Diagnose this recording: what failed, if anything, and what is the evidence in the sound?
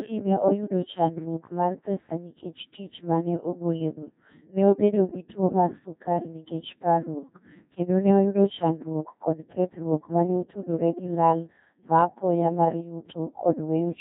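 The fault is at the codec stage. The whole clip has been through a Codec 2 vocoder, and the damage is heavy: the speech sounds robotic and buzzy from start to finish. The coarseness fits a rate of about 1.6 kbit/s. Only pitch, voicing, energy and a rough spectral envelope survive, and the decoder rebuilds the speech from sine waves. On a spectrogram, the harmonics look unnaturally regular and the upper bands are smeared. The waveform looks synthetic rather than like the original signal.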